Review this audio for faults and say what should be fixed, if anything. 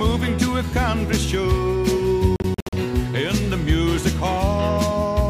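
Between 2.36 and 2.73 s the audio breaks into several short silences, the longest 61 ms, totalling about 203 ms. That pattern likely points to a Bluetooth dropout. Unlike a buffer underrun, the sound resumes further along, as if it had kept playing. Keep the receiver close with a clear line of sight, and reduce 2.4 GHz interference.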